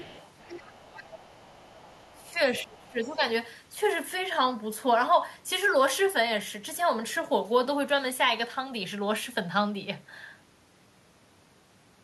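An echo canceller that is likely leaving residue from the loudspeaker playing the far end lets the other side's voice leak through from 0.0 to 2.29 s. It sits faintly underneath the speech, about 25 dB down, as a second voice. The same residual echo leaks back in as brief scraps at 2.49 to 2.64 s and again, even fainter at about 30 dB below the speech, at 2.86 to 2.91 s.

Speech is suppressed in double talk twice, likely because the canceller cannot separate the near talker from the loudspeaker echo while both sides are active and so turns everything down. From 2.13 to 2.38 s the voice dips by roughly 15 dB. From 2.63 to 3.21 s it is pulled down harder, by around 20 dB, and sounds ducked.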